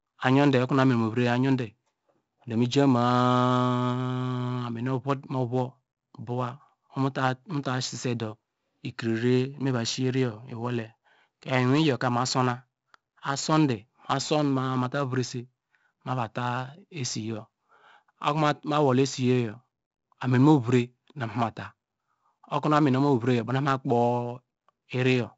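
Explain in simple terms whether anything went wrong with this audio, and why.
The whole clip has heavy 4-bit ADPCM compression: each sample is squeezed into a tiny step, so louder speech gets a gritty hiss, and everything above 7.7 kHz is gone.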